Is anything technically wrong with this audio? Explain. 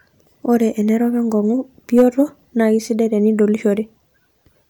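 Yes. From 1.97 to 2.2 s, after "enerok enkong'u" and before "naa keisidai", the speech is driven about 4 dB past full scale, causing hard clipping: flattened peaks that crackle.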